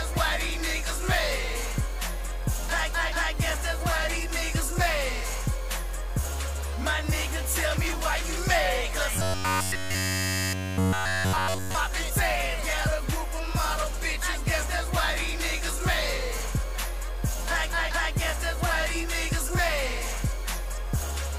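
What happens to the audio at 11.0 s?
At 11.0 s the audio is inside a stretch of robotic sound from repeated short buffers, running from 9.16 s to 11.75 s. Across that span the sound becomes a rigid, metallic buzz at about 93.8 Hz that only loosely tracks the underlying material. The likely cause is audio arriving too slowly, with the playback side filling each gap by looping the last fragment, roughly 10.7 ms long, and skipping the real signal essentially throughout.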